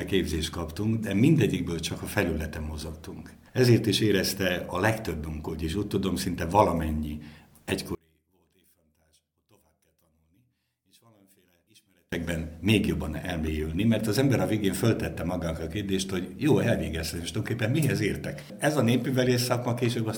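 From 7.95 s to 12.12 s the sound collapses to a faint residue, about 35 dB below the surrounding audio, before returning at full level. The likely cause is one channel inverted: with one stereo side flipped in polarity, everything shared by left and right cancels when the two are summed to mono, leaving only their difference. On a waveform the mono sum shrinks to a near-flat band for that span; a spectrogram shows that span almost emptied, with only thin traces remaining.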